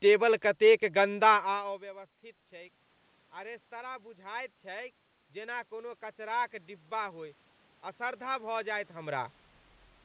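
From 3.32 s to 7.35 s there's automatic gain rising. The level coming into the mic drops by about 22 dB, so the gain control slowly turns itself up, adding about 7 dB over those four seconds. You hear the voice and the room noise creep up together, a gradual swell rather than a jump, and the voice still ends up well short of its earlier level. All of it sits in a band that stops at 4 kHz, which fits a G.711 call path.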